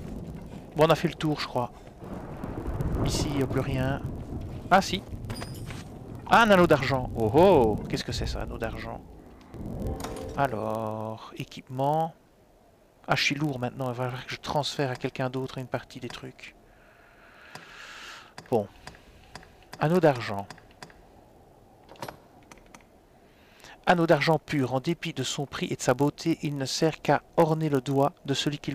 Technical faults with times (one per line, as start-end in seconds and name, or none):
0.00-28.74 block size mismatch (padded)